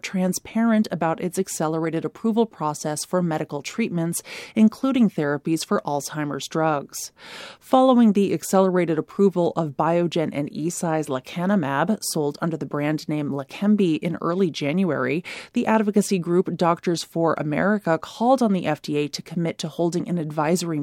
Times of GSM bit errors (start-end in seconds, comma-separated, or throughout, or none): none